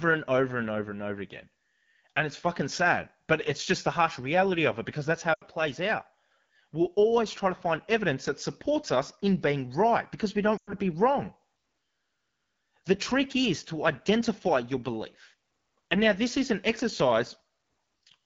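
This speech clip sounds rough and raspy from start to finish. That points to the AMR wideband (HD Voice) codec running at one of its lowest rates, which fits 8.85 kbit/s, where its pulse-driven vocal tract model can no longer render the voice cleanly. At 5.33 to 5.44 s and again at 10.57 to 10.73 s, the sound drops to near silence within two frames before the voice returns weakly. These are lost AMR speech frames, about 80 ms and 100 ms of them, with the decoder repeating its last good settings at falling gain.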